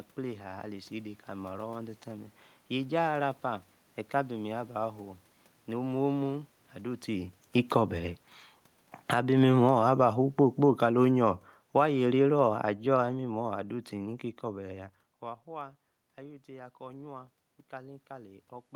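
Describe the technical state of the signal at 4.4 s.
At 4.4 s the signal is intact, with only the room's own background noise audible beneath the speech.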